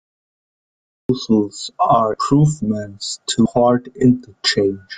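The recording or stream was picked up late, so the clip is digital silence until 1.09 s. Speech then cuts in mid-sound with an abrupt edge and no natural attack or fade-in, as though the opening was chopped off.

Whole compressed frames were dropped or rejected by the decoder at 2.13 to 2.18 s and again at 3.45 to 3.51 s. About 200 ms and then about 300 ms of speech vanish, which fits roughly ten and fifteen 20 ms frames.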